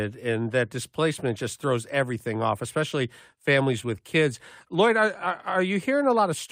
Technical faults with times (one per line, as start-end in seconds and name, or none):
none